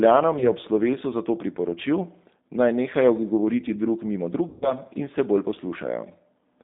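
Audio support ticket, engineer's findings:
G.729 codec, whole clip: narrowband, slightly rough, synthetic-sounding speech. Spectrogram shows a hard band of roughly 200 Hz–3.7 kHz, with nothing above 4 kHz and smeared harmonics. Cause: 8 kbit/s CELP coding rebuilding speech from filter, pitch and sparse pulses.

Packet loss concealed by the speech codec, 0.39–0.45 s before "ob slovesu zato", and 4.48–4.74 s between "drug mimo" and "in se": buzzy or noisy, fading stretch of the preceding sound, with weak recovery afterwards. Waveform shows decaying repeated pitch cycles. Spectrogram shows frozen harmonics. Gaps fit one and seven lost 20 ms packets, concealed by decoder extrapolation.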